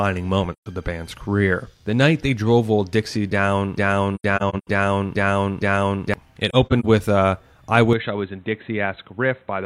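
At 0.52 s a soft-edged hole of about 128 ms fades out and back in just before "of the band's career". This is AAC frame loss with muting: the decoder zeroed the missing frames and the overlapping windows smoothed the edges. From 3.78 to 6.14 s a 460 ms fragment repeats five times back to back, a broken-record loop most likely caused by a stalled stream resending its last piece. Within that stretch, from 4.16 to 4.67 s, further muted frames leave about 256 ms of gaps across half a second, the longest about a tenth of a second. Between 6.49 and 6.85 s, short dropouts of about 40 ms at most, totalling 128 ms, come just before "with a I". From 7.93 s to the end, immediately after "with a I", the sound turns dull and boxy, with nothing above 4 kHz, about 5 dB quieter, and with a new noise floor roughly 35 dB down. There is no silence at the change, which points to the input having been switched to a poorer device.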